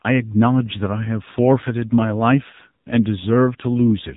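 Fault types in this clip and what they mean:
AMR narrowband mobile codec: the speech has passed through the 2G/3G narrowband speech coder, which models the vocal tract frame by frame. Nothing above about 3.8 kHz survives, and plainly audible buzzy, synthetic colouring fits a low mode around 7.4 kbps.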